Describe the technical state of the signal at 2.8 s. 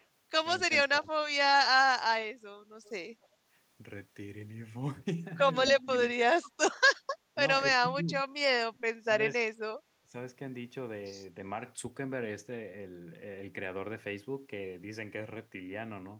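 At 2.84 to 2.89 s there is an echo leak: a brief, faint copy of the speech returns about 259 ms after the original, sitting very low, roughly 35 dB under the direct voice. The likely cause is a far-end loudspeaker whose echo canceller let a scrap of its microphone pickup through. On a spectrogram it shows as a weak smear repeating earlier harmonic patterns; the waveform barely changes, with only a slight low-level ripple.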